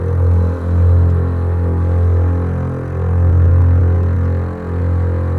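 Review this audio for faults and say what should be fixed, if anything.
Repeated stalls (stutter) occur between 3.31 s and 4.18 s. Packets reached the receiver late or slower than playback, so its jitter buffer ran dry eight times. Each time, the last sound was stretched to cover the wait. The gaps are brief, the longest about 12 ms, totalling 89 ms, roughly a tenth of that stretch. Nothing is lost, but the sound drags and stutters. Prevention: use a larger or adaptive jitter buffer and a steadier network path.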